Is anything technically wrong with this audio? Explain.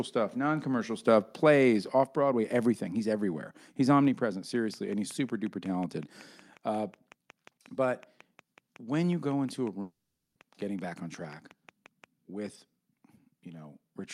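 Yes, three faults can be heard in this speech clip.

At 2.04 s the microphone volume is stepped down. Voice and background both drop by about 4 dB at once, most likely because the call software judged the input too hot and cut the device gain. On a waveform the envelope shrinks abruptly at a single point.

From 4.56 s to 12.05 s a train of clicks ticks steadily over the sound, about 5.5 per second and roughly forty in all, reaching about the level of the speech and persisting through pauses. The likely source is electrical interference or a faulty connection or power supply. A spectrogram shows evenly spaced thin vertical lines across the full band.

From 9.81 s to 10.37 s there is a long network dropout. About 540 ms of audio never arrived, most likely lost in transit. The receiver stretched the last sound into a fading buzz, then left roughly 240 ms of near-silence before speech resumed with that stretch missing. 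A spectrogram shows a smeared, decaying band followed by a blank gap.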